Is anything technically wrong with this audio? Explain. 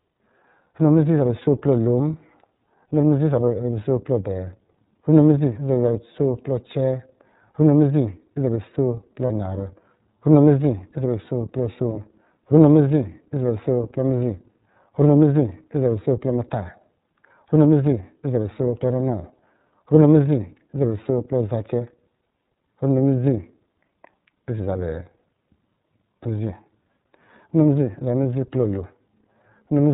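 Yes. Throughout, the iLBC codec limits the audio to narrowband and makes it plainly rough and synthetic, which fits its 13.33 kbps mode with 30 ms frames. At 9.27 to 9.30 s, lost iLBC frames leave a 30 ms gap, consistent with a single lost frame. The decoder fills it with a repeated pitch cycle mixed with noise, heard as a brief buzzy held sound before clean recovery.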